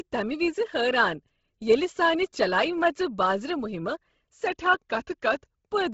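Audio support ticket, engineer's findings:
Bluetooth LC3 compression, whole clip. Speech band stops dead at 7.7 kHz. Heavy codec damage with a breathy, grainy edge on the voice, where upper spectrum has been zeroed and refilled with noise. Probable component: the BLE Audio link, likely LC3 at a low rate. Smearing fits 10 ms transform frames, and the damage level points to roughly 16 kbps.

Drift correction step, 4.47 to 5.67 s. Speech suddenly slows about 5.4% and drops about 95 cents, close to a full semitone flat, for 1.2 s, then snaps back to normal speed and pitch. Speed and pitch move together, so this is a resample-rate change, not pitch processing. Probable component: clock-matching logic, likely a one-step rate correction to refill or drain the playback buffer.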